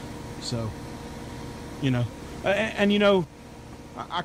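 A sudden gain jump occurs at 3.24 s. The level drops by about 6 dB in a single step and stays down until the end of the clip, with the sound and its background noise falling together rather than fading. The likely cause is a gain setting or bit shift applied from one sample to the next with no ramp. The result is an abrupt step down in loudness at that point.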